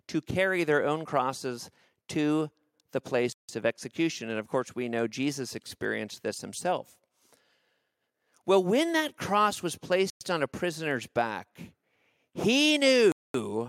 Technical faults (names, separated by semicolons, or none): Bluetooth stall